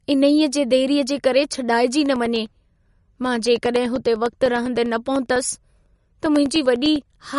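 Throughout, the speech has a plainly audible watery, swirly quality, likely from MP3 compression. A spectrogram shows nothing above 11.2 kHz and flickering patches, consistent with roughly 48 kbps.

From 2.06 s to 7.26 s, periodic USB or driver dropouts appear: about fifty brief silent gaps of roughly a millisecond, every 0.1 s. They sound like regular ticks and show as evenly spaced flat notches in the waveform and thin vertical lines on a spectrogram.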